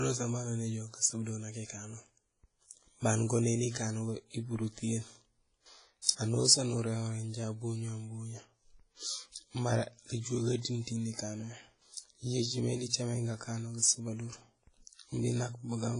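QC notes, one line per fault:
Throughout: WMA compression. The speech has likely passed through a low-rate transform codec such as Windows Media Audio, and the heavy damage fits a bitrate around 24 kbps. Long transform blocks spread quantisation noise across tens of milliseconds, and weak spectral lines are zeroed, so nothing survives above about 10.1 kHz. The result is a dull, ringing, washy sound, with a hiss that swells and fades along with the speech.
6.02–6.07 s: pre-echo. A sharp attack lands late in a transform block, and the encoder spreads that block's quantisation noise evenly across it, so noise sized for the loud onset also fills the quiet gap before it. That produces about 51 ms of hiss leading into the attack, which arrives softened and smeared rather than crisp, a short smudge of noise just ahead of the sound's start.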